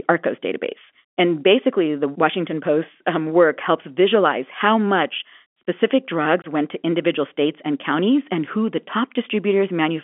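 At 6.42 to 6.44 s, packet loss filled with silence drops about one 20 ms packet of the G.711 telephone-band speech, leaving a brief hole with hard edges.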